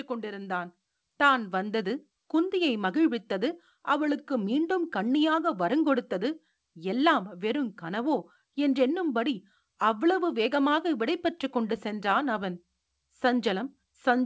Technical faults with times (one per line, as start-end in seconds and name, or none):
0.07-2.05 automatic gain rising